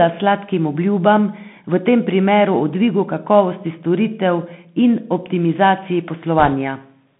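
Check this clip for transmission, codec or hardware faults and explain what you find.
Two faults are present: a narrowband headset codec throughout, and a short burst of link errors near the end.

Bluetooth CVSD headset codec, throughout: one-bit delta coding with adaptive step, which fits a 64 kbps stream, confines speech to roughly 150 Hz–3.5 kHz, leaving scratchy sibilants and granular hiss.

Bit errors on a Bluetooth voice link, 6.39–6.53 s: at roughly one to two percent, flipped bits each nudge the waveform by an amount that grows with the speech level, producing a brief rushing crackle rather than loud clicks.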